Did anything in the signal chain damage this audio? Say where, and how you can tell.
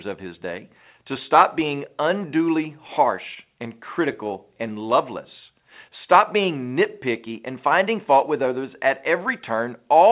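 Yes. Clock drift between sender and receiver, at the network and buffer stage, runs all through the clip. The sender's clock is about 2 percent slow, so the receiver keeps running short of audio.

Repeated timing corrections from 0.29 to 9.93 s make the speech play at 98 percent speed. The buffer repeats short pieces, adding around a fifth of a second overall.

A short stall from a late packet at 3.34 to 3.39 s holds a sound for 22 ms. The jitter buffer ran empty, then resumed without loss, behind a narrowband call codec with nothing above 4 kHz.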